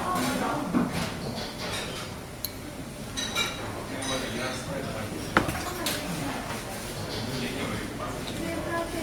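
Everyday sound, marked by three isolated sharp clicks at 0.46 s, 4.24 s and 7.88 s. Each is likely caused by dropped samples, where a fraction of a millisecond of audio goes missing and the waveform leaps straight from one value to a later one. That step shows as a sudden discontinuity in the waveform and as a thin vertical line spanning the spectrogram, with nothing audibly absent beyond the click itself.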